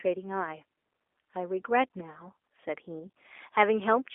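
G.729 codec damage runs throughout this speech: a 300 Hz to 3.5 kHz line band, nothing above 3.7 kHz, and plainly rough, synthetic tone from pulse-based rebuilding at a rate fitting 8 kbit/s.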